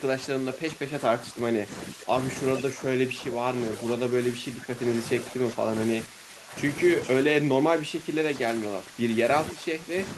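From 0.00 to 2.15 s, 2.65 to 4.89 s, 5.24 to 6.55 s and 7.26 s to the end, the speech repeatedly dips by up to about 10 dB. This is likely speech suppressed in double talk, with the echo canceller turning down the near talker while the far side spoke. At 2.56 to 2.61 s and 7.05 to 7.15 s, faint scraps of the voice return about 15 dB below the speech, delayed by 442 ms and then 452 ms. This is likely echo leak, where loudspeaker pickup escaped cancellation and was sent back.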